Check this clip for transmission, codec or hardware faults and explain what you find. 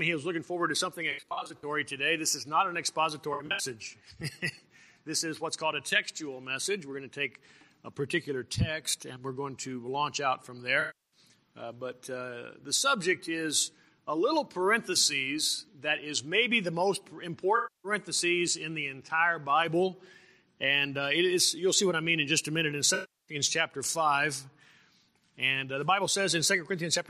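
AAC frame loss with concealment occurs five times: 1.11–1.64 s, 3.33–3.65 s, 10.80–11.20 s, 17.56–17.92 s and 22.94–23.36 s. The decoder patches the missing frames from the last good spectrum. The first two are scattered dropouts with runs of roughly 70 ms, so they sound smeared and phasey. The later ones lose 280–340 ms of audio each.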